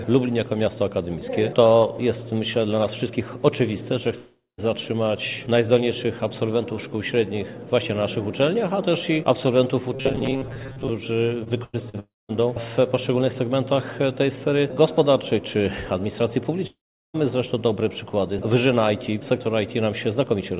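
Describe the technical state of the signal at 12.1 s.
At 12.1 s you're inside a gap that runs from about 12.00 to 12.31 s, most likely a long network dropout. When the packets stopped arriving, the receiver kept the last bit of sound going as a fading buzz, then fell to near-silence for roughly the final 0.2 s. Around 0.3 s of the original audio is simply gone when it picks back up, all still band-limited to 4 kHz by the call path.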